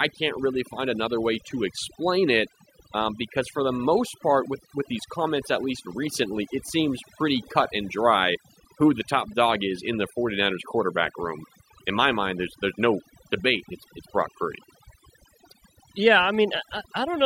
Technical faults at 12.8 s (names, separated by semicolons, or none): overdone noise removal